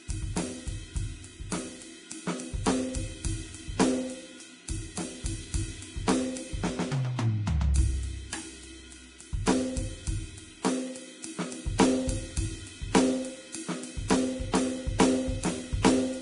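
Heavy Vorbis compression, likely around 32 kbps, cuts everything above 10.6 kHz throughout the music and quantises the treble into grainy hiss and roughened tones.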